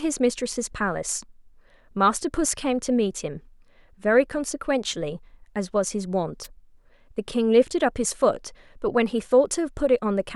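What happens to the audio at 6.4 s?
At 6.43 s the radio link from an analogue FM wireless microphone fades, as reflected copies of the signal arrive out of phase and cancel the direct path. With too little carrier reaching the receiver, its own noise rises through the speech until the signal recovers at 6.47 s. This wireless microphone noise hit lasts about 40 ms and is heard as a brief swish of static layered over the speech.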